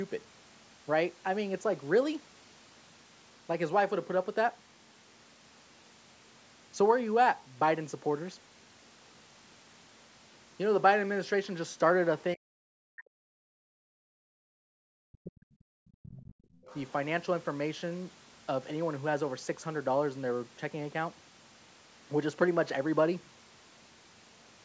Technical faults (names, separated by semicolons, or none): speech suppressed in double talk; background gated by the echo canceller; other side's voice leaking through